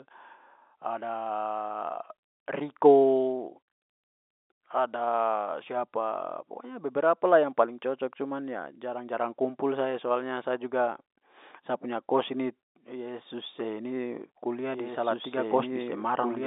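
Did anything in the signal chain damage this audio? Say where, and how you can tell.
Yes. From 14.74 s to the end, the speech is doubled. A second, full-band copy of the audio runs about two seconds behind the original, at roughly the same level. The copy is dry, with no decay or room colour, and it cuts in abruptly. That points to the capture or editing stage. A slower second path likely picked up the same signal again and mixed it back in. The telephone band is unchanged, with nothing above 3.8 kHz.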